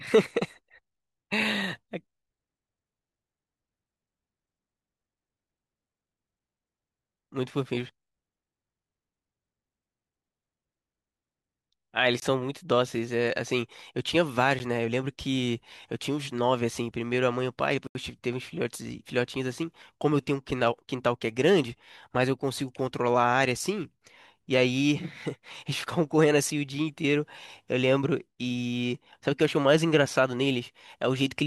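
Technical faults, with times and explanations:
12.20–12.22 s, 14.59 s and 17.87–17.95 s, blocks of digital silence: speech drops out for 20, 11 and 80 ms. The waveform shows a flat line and the spectrogram shows blank vertical gaps bordered by broadband streaks.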